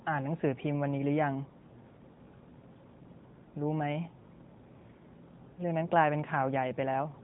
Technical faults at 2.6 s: lost AMR speech frames

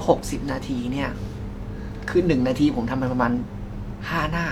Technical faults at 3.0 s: none

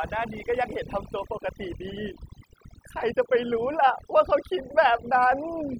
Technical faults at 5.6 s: overdone noise removal

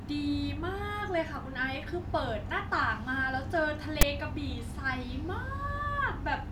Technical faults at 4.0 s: file tags played as audio

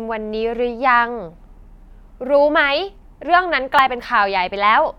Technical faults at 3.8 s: overlap between stream segments

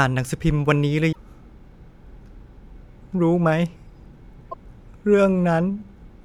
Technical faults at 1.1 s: damaged data in a compressed stream

